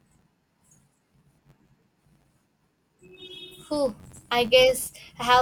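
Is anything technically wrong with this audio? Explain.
Yes. Throughout the speech, a filter restarts on every block: it loses its internal state at each block boundary and starts from silence, producing a small transient each time. These repeat at about 93.8 Hz, which fits a 512-sample buffer, and are heard as a buzz that tracks the signal level.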